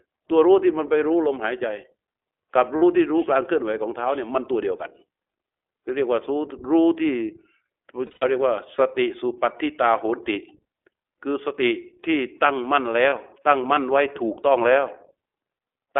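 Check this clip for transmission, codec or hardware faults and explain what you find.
Yes, there are faults: the speech has been carried through the iLBC codec for its whole length, and three short dropouts were covered over by the decoder's concealment of lost iLBC frames.

iLBC codec, throughout: The speech is confined to roughly 300 Hz to 3.5 kHz, giving a thin, telephone-like tone, and the coding damage is plainly audible as a rough, slightly synthetic grain. The codec rebuilds each frame's excitation independently, and the texture fits the 15.2 kbps mode with 20 ms frames. On a spectrogram, energy stops sharply at 3.5 kHz, with little below 300 Hz.

Lost iLBC frames, at 2.76–2.84 s (60 ms), 8.06–8.24 s (140 ms spread over 160 ms, the longest unbroken stretch around a tenth of a second), and 13.10–13.13 s (20 ms): Where packets went missing, the decoder repeated the last pitch cycle blended with noise. 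Each gap sounds like a briefly held, buzzy, breathy vowel, and clear speech returns almost at once. The waveform shows a regular repeating cycle, and the spectrogram shows flat, smeared harmonics.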